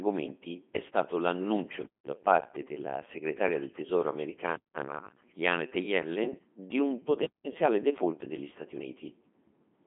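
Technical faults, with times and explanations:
Throughout, Codec 2 vocoder: heavy damage. The speech is resynthesised from sine waves using only pitch, voicing, energy and a coarse spectral envelope, fitting a 2.4 kbit/s mode, so it sounds robotic and buzzy, confined to 200 Hz–3.4 kHz with nothing above 3.5 kHz.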